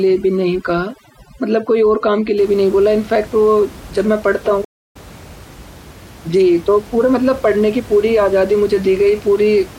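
From 0.00 to 2.38 s, overdone noise removal is at work. The noise reducer is set too hard. It cuts individual frequency bands near its noise estimate and takes quiet parts of the voice with them. The room noise, about 21 dB below the speech, drops and breaks up into twinkling specks.

At 4.65 s a stream reconnect breaks the audio. The connection dropped and the player went silent for about 0.3 s. It then reconnected and restarted decoding mid-stream. Sound resumes at 4.96 s, roughly a fifth of a second further on, so a short stretch is skipped.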